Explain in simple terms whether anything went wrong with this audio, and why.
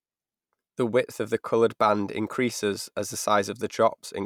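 At about 2.50 s there is a single sharp tick in the speech. It comes from a block of digital silence: for roughly 1.5 milliseconds the sound drops abruptly to nothing and snaps back, most likely because the program failed to deliver that bit of audio in time.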